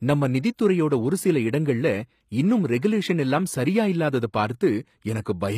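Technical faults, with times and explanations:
Throughout, HE-AAC compression: s sounds are gritty and lispy, with nothing above 15.5 kHz, likely from low-bitrate HE-AAC rebuilding treble by copying lower bands upward.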